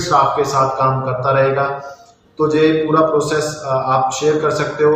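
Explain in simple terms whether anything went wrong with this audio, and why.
Nothing went wrong with this audio.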